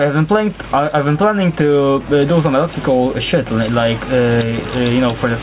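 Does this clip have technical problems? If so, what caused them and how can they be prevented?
Yes. Input gain was likely set far too high, so a fast limiter clamps each loud sound, making the gain swing by around 10 dB: gain pumping throughout. Lower the microphone gain so the limiter rarely engages. The 4 kHz ceiling fits a normal G.711 call path and is expected.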